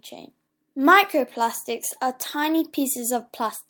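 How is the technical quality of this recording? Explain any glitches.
The recording has two linked timing faults: the speech drifts slightly slow, and the receiver keeps patching the gap.

Clock drift between sender and receiver runs through the whole clip. The sender's clock runs about 2 percent slower than the receiver's, so the jitter buffer keeps draining and the playback side runs short of incoming audio. The result is a subtly unsteady pace rather than one obvious glitch. On a waveform, syllable spacing stretches a little, and on a spectrogram, formant tracks run slightly long.

Repeated timing corrections occur from 0.66 s to 3.66 s. To fill the shortfall, the receiver repeats short slices of audio, adding roughly 70 ms in total, so the effective speed sits near 98 percent. The edits all lengthen the sound, at uneven spacing, and are heard, if at all, as slight hiccups or a halting rhythm. 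On a waveform, small duplicated cycles appear at the splice points. A spectrogram shows brief smeared or doubled columns where a fragment repeats.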